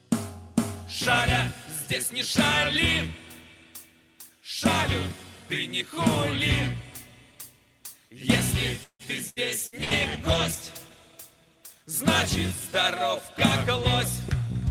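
The audio shows repeated packet loss (robotic sound) from 8.83 to 9.94 s. Four gaps arrive in quick succession, the longest 160 ms. About a third of that stretch is concealed by extending the preceding sound, and 180 ms drops out entirely, giving a choppy texture. Overlapping it, a call bitrate drop runs from 9.51 to 12.49 s. The audio turns coarse and watery with dulled highs, which fits the encoder falling from around 40 kbps to around 18 kbps, holding that low point for 1.38 s before recovering.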